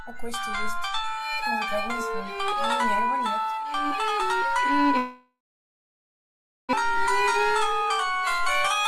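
At 4.97 s the music smears into a fading buzz, then about 1.3 s of silence. It returns at 6.75 s with about a second missing. This is likely a long network dropout.

Jitter buffer speed-up follows, from 6.82 to 7.05 s at 113% speed and from 7.65 to 8.39 s at 109%. Clipping out pitch periods trims the excess delay, so the tempo rushes while the pitch stays the same.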